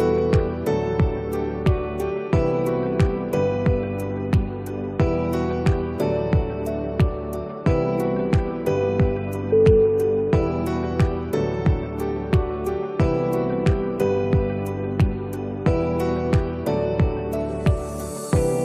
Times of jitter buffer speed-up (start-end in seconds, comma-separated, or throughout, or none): none